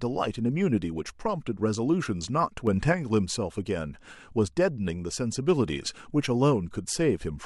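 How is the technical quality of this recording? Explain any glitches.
There's one glitch in this speech recording: a sudden gain jump from 2.67 to 2.93 s. The level leaps up by about 5 dB with no ramp, background noise included, then drops back. Likely a digital gain setting applied abruptly, sample to sample.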